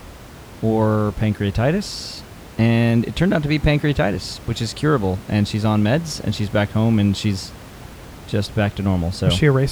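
No technical faults can be heard anywhere in this speech recording. Some room noise sits in the background, about 20 dB below the speech, as part of the recorded space rather than any failure of the system.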